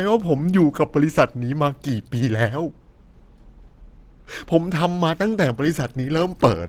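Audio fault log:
throughout Opus compression. The speech sounds hoarse and grainy, with noisy upper bands. This is likely a low-rate hybrid encode, fitting about 16 kbps.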